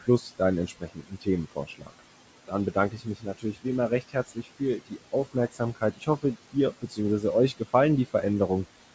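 From 0.01 to 2.0 s and again from 2.47 to 7.23 s, speech is cut by the noise suppressor: quiet consonants and word endings are mistaken for noise and pulled down by up to about 17 dB. This adds up to roughly two and a half seconds of swallowed sound, seen as abrupt gaps in the waveform envelope. Throughout, noise suppressor artifacts lower the background by about 18 dB between words and let it rise beneath them. On the spectrogram this shows as a flickering, patchy noise floor under the 8 kHz band edge of the G.722 call path.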